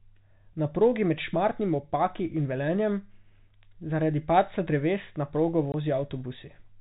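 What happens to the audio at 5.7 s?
Packet loss filled with silence at 5.72 to 5.74 s: a 20 ms gap, fitting one lost packet, replaced by silence, with abrupt edges.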